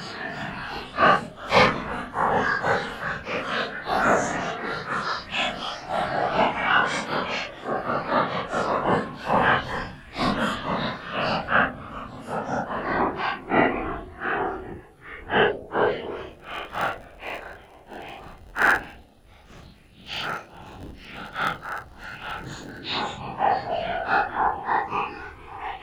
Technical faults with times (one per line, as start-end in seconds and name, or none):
16.28-22.82 block size mismatch (padded)